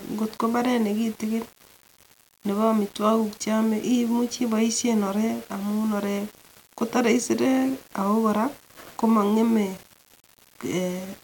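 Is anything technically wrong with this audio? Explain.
Yes. Throughout the speech there is a grainy, gritty distortion that rides on the voice and shifts with it, roughening quiet syllables and making the softest tails sputter or cut to silence instead of fading smoothly. The likely cause is low bit depth without dither: the level steps are coarse, consistent with about 6 bits rounded with no added dither, so the error tracks the signal at roughly 25 dB below it rather than forming a steady hiss.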